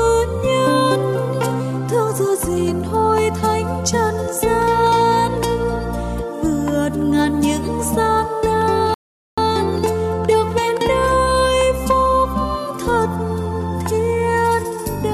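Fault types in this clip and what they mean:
Rebuffering stall: the player drained its buffer of downloaded audio and halted until more data arrived, so the sound drops to silence from 8.94 to 9.38 s, then resumes exactly where it stopped, with nothing skipped but about 0.43 s of dead time inserted.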